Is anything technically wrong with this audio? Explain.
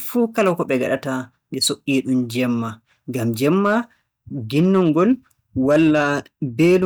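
Yes, the speech has hard clipping at 0.24–0.93, 3.44–3.77, 4.58–5.12, 5.69–6.13 and 6.60–6.86 s. Peaks overshoot the stage's ceiling by about 2 dB, and by about 3 dB in the last two, and are sliced flat. Unlike gentle saturation, this gives abrupt, bright crackle on loud syllables.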